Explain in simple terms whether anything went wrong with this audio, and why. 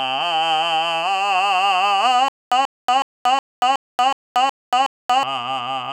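From 2.28 to 5.23 s, a stutter with silent gaps: a 136 ms snippet of music repeats eight times, silence between, likely from a stalled stream.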